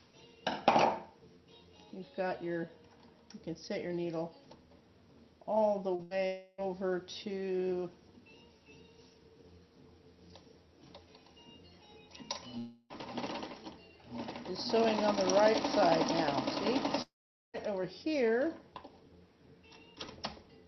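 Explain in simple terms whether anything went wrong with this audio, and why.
Short concealed packet loss, at 5.95 to 6.02 s: about 40 ms of the audio never arrived in time. The receiver covered the hole for about 35 ms by carrying the last sound forward, then blended back into the real audio, leaving a brief smear.

Burst of packet loss, right after at 6.03 to 6.14 s: a larger group of packets went missing, costing about 80 ms of audio. The receiver stretched the previous sound across the gap for about 76 ms, fading it down, before the audio picks up again further along.

Long network dropout, at 6.27 to 6.61 s, 12.58 to 12.93 s and 17.02 to 17.57 s: the sound turns into a fading held tone or hiss, then goes quiet. About 320, 320 and 520 ms of audio are lost, and the last gap is silent for about 450 ms. A long interruption in the network connection is the likely cause.

The audio travelled over an internet call link that keeps frequencies up to about 8 kHz.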